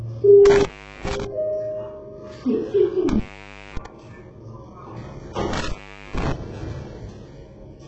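The audio was likely squeezed through heavy HE-AAC compression at a very low bitrate, around 8 kbps. Nothing survives above 8 kHz, and the upper range is rebuilt rather than real, so it sounds gritty and metallic throughout. An intermittent contact also opens three times, at 0.45–1.24 s, 3.09–3.86 s and 5.53–6.32 s. Each time the sound drops out with crackle at the edges, for gaps of 402 ms, 577 ms and 432 ms.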